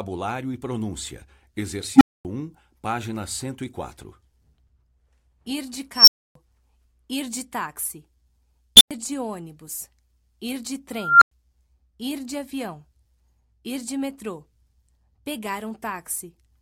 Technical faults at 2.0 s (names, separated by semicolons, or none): unstable filter